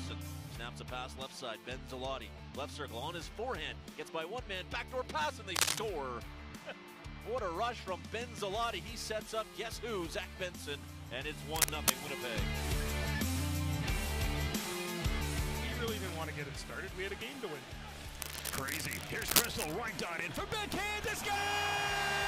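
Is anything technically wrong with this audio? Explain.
Yes. Cable scratch noise: harsh, uneven scratching bursts at 5.56–5.79 s, 11.54–11.96 s and 18.22–19.75 s, the first two slightly louder than the sound itself. They likely come from a worn cable or connector whose contact resistance flickered as it moved.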